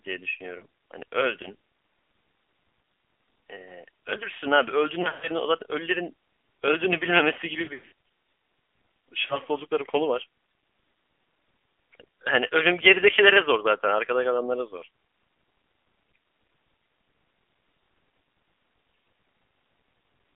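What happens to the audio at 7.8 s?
Between 7.64 and 7.92 s the speech breaks up from lost AMR speech frames. Radio errors make frames fail their checks, so the decoder keeps reusing the last good pitch and vocal-tract settings at falling gain. About 200 ms goes missing, scattered over 280 ms, which fits roughly ten 20 ms frames. The longest gap, about 100 ms, sounds smeared and drawn out before sinking toward silence, and the speech returns weak and rough. On a spectrogram the harmonics freeze into flat, fading horizontal streaks, broken by brief dropouts. On the waveform the envelope sags in uneven dips, with short repeating patterns where the concealment holds.

That moment also carries the AMR narrowband mobile codec running at 7.4 kbps, with its damage plainly audible. The codec models the voice as a vocal-tract filter driven by a few pulses per subframe, and at this low rate that gives a buzzy, synthetic tone. 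The line band, about 250 to 3400 Hz, sounds thin and boxy. On a spectrogram the energy stops sharply near 3.4 kHz, with nothing below about 250 Hz and blurred detail in between.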